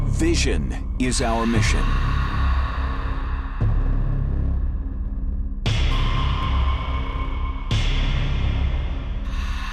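Nothing stood out as a technical fault on listening to the audio.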